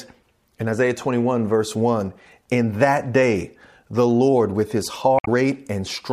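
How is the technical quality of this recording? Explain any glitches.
The speech has one glitch, from 5.16 to 5.28 s, just after "with his": damaged data in the compressed stream. Corrupted bytes made the decoder misread those frames and lose sync while hunting for the next valid header, producing a brief chirp, squawk, click or short hole lasting about 0.12 s.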